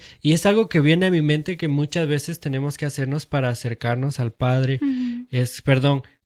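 Nothing goes wrong anywhere in this speech, and the light Opus voice compression it carries is just doing its ordinary job.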